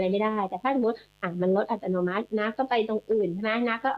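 Throughout the speech, a mains buzz sits well below the voice: switching spikes on 50 Hz mains spray harmonics into kilohertz, sounding raspy rather than like a smooth hum.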